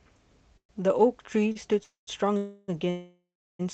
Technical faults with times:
0.57-0.71 call audio freeze
1.52-1.57 short stall from a late packet
1.83-2.09 call audio freeze
2.37-3.61 call audio freeze

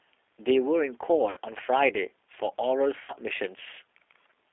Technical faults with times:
0.00-4.53 G.729 codec
1.30-1.39 VoIP packet loss concealed by the speech codec
3.04-3.13 VoIP packet loss concealed by the speech codec

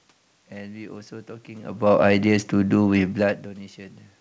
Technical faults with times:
none

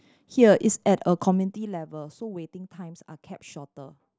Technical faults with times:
none

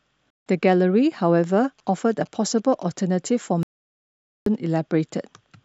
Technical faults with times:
0.32-0.44 digital broadcast dropout
1.64-2.83 GSM signalling bursts
3.63-4.47 digital broadcast dropout

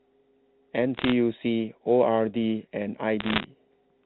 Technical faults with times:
0.95-1.12 bit errors on a digital phone line
3.20-3.44 bit errors on a digital phone line

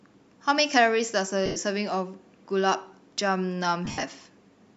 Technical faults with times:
1.46-1.56 lost LE Audio frames
3.85-4.03 lost LE Audio frames

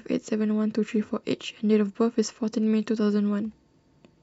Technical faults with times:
none

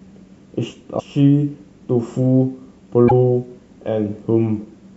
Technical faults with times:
0.00-4.97 MP3 compression
0.96-1.00 damaged data in a compressed stream
3.07-3.12 damaged data in a compressed stream

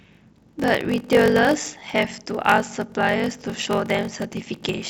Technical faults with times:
0.00-4.89 block size mismatch (padded)

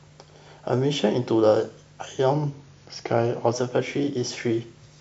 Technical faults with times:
2.33-3.53 drift correction step

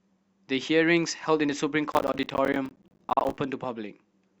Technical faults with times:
1.92-3.38 processor overload crackle

